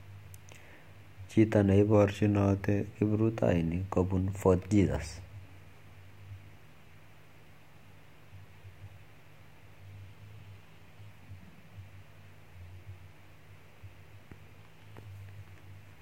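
A drift correction step runs from 1.94 to 2.86 s, ending just before "kiprutainik kopun". For just under a second the speech slows by about 6% and drops 109 cents in pitch, a little more than a semitone, so it sounds briefly dragged and detuned before snapping back to normal speed and pitch. The likely cause is clock-matching software abruptly lowering the playback rate to manage its buffer, then restoring it.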